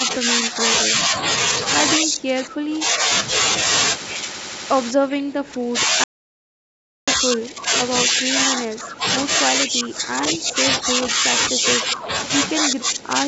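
An echo canceller likely failed to separate this talker from the far end's loudspeaker echo during double talk and turned the near side down with it. This speech suppressed in double talk dips the speech at 0.0–0.13 s, 0.52–1.14 s, 1.97–3.1 s, 4.92–7.73 s, 8.05–9.06 s, 9.38–12.1 s and 12.57 s to the end. The drops range from a few decibels to about 20 dB, deepest in the last stretch, and the voice fades or breaks into pieces.

From 6.04 to 7.08 s, inside the fourth suppressed stretch, the input was likely lost while the recorder kept writing silence. This audio dropout to silence leaves about 1 s of silence with no room tone at all, and whatever was said in that gap is gone.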